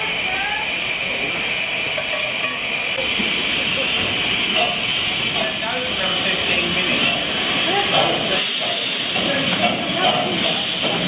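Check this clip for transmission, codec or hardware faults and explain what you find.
No transmission, codec or hardware faults turn up in the clip: the signal comes through the call path intact, with nothing above 4 kHz, which fits narrowband G.711 mu-law telephone coding.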